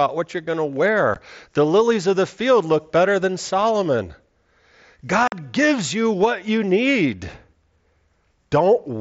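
A brief hole at 1.14 s, after "what you're going to", and a 45 ms gap from 5.28 to 5.32 s, before "gives you what you", cut abruptly through the speech. This is unconcealed Bluetooth headset packet loss: headset-to-phone voice packets vanished and were filled with silence or an idle pattern, not concealed.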